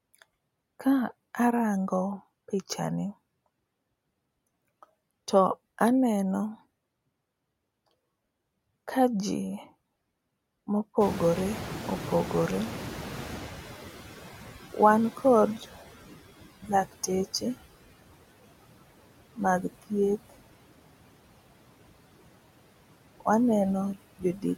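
Throughout the recording, noise suppressor artifacts are present. The suppressor treats the steady background as noise and pulls those bands down by about 20 dB, deciding frame by frame. Between phrases the background sinks away, and under the speech it comes back up, so the residue pumps in and out.

From 11.0 to 15.79 s, the noise suppressor is catching up. At around 11 s the room noise jumps by about 22 dB and settles about 13 dB below the speech. The suppressor's noise estimate lags behind this change and needs 4.79 s to adapt. During that stretch the louder background comes through with less reduction and then gradually sinks, ending about 15 dB lower once the estimate has caught up.

From 24.16 to 24.45 s, speech is cut by the noise suppressor. Near the end of the clip the suppressor mistakes part of the speech for background and pulls it down with the noise, by about 22 dB at the deepest point. 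Around 150 ms of that window is affected. Quiet sounds there lose their edges and seem swallowed, fading into the background instead of finishing cleanly.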